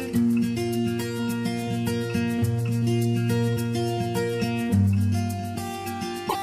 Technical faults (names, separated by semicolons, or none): damaged data in a compressed stream